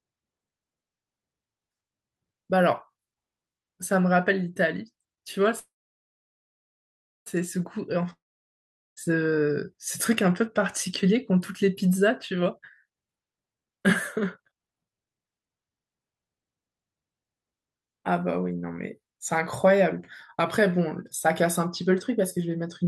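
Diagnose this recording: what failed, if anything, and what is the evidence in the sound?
From 5.59 to 7.28 s the speech stops, a brief buzz fades into about 1.57 s of silence, and then it resumes exactly where it paused. Nothing is lost. This is a call audio freeze in the network stage, likely delayed packets that emptied the jitter buffer.

At 8.13 s the sound breaks off again, trails briefly, and goes silent for about 0.79 s. It returns at 8.99 s with roughly 0.84 s of speech missing. This long network dropout is likely caused by packets that never arrived, so that stretch was never played.

From 12.42 to 13.82 s the speech runs at 154% speed, and from 14.26 to 16.52 s at 141%, sounding hurried but unchanged in pitch. This is jitter buffer speed-up: the receiver cut short pitch-period slices, about 0.7 s and then about one second in total, to reduce the delay the buffer had built up.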